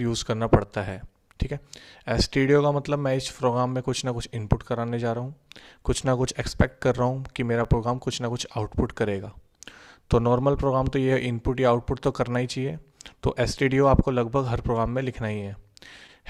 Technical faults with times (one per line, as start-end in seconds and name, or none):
0.00-16.30 clock drift between sender and receiver
0.66-15.43 repeated timing corrections